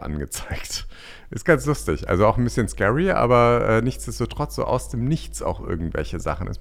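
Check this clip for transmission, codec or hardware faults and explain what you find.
One fault is present: mains hum. From 1.47 s to the end, a steady 50 Hz drone sits under the speech, roughly 15 dB below it. Power-line current leaks in through a ground loop or nearby transformer. A spectrogram shows an unbroken horizontal line at 50 Hz, and the waveform keeps a regular low ripple even between phrases.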